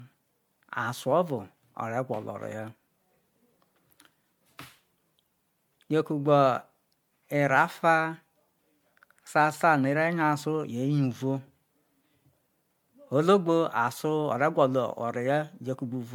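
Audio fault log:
Throughout, generation loss: the speech sounds swirly, smeared and hollow, with consonant onsets blurred, more degraded than a single MP3 pass would leave it. This likely comes from about four rounds of decoding and re-encoding, which fits a 96 kbit/s MP3 chain where each pass requantises on a shifted frame grid. On a spectrogram, holes and flickering patches pile up across the band below a cut-off near 20.1 kHz, and waveform transients look softened.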